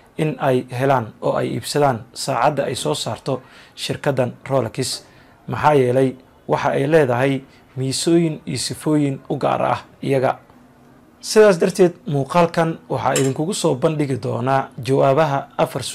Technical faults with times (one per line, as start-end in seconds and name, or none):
none